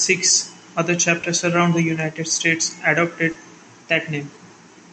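A speech recording heard through a call codec, with two brief smeared, wobbly patches, at 1.21 to 1.25 s and 3.31 to 3.37 s, where the sound blurs for an instant before settling. These are short concealed packet losses: about 20 ms and then 40 ms of audio failed to arrive, and the receiver covered each hole by extending the preceding sound and crossfading back into the real signal.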